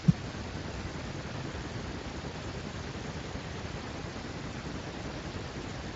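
A second capture path or an out-of-step edit has likely mixed the same speech in twice, so from start to end a full-band copy trails the original by roughly 300 ms at about the same loudness. This doubled audio track makes every syllable arrive twice, like a flat, dry slapback with no decay or room colour, smearing word boundaries into an overlapping double voice. Above that, the light Speex coding leaves nothing past 7.6 kHz.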